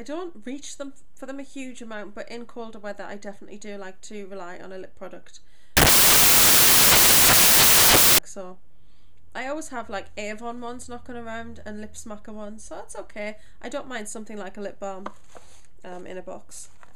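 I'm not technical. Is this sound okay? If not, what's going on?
No. From about 5.77 to 8.18 seconds the audio turns into a loud hiss, like static. That's samples built from the wrong bytes: the player stitched each tiny slice of sound together wrongly, so the fast-jittering fine detail became the main signal.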